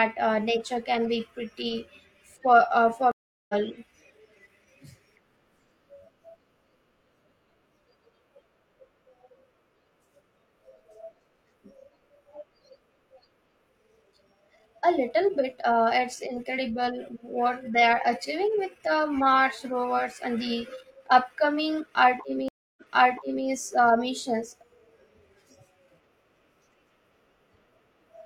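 At 3.12 to 3.54 s the speech stops for 376 ms and comes back about 0.4 s further on. This is a stream reconnect: the connection dropped and the player restarted its decoder mid-stream. A second reconnect at 22.48 to 23.46 s has a 283 ms gap, but the audio resumes 697 ms earlier, repeating material already heard. A plain dropout would leave a gap without this jump in position.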